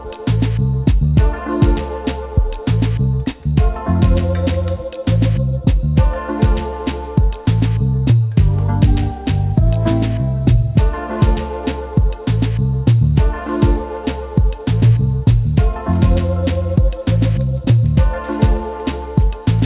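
Aliasing runs through the entire clip: the audio was downsampled without an anti-alias filter, so content above 4 kHz folds back below it as unrelated, gritty tones around 25 dB under the signal. The hard spectral edge at 4 kHz points to an 8 kHz target rate.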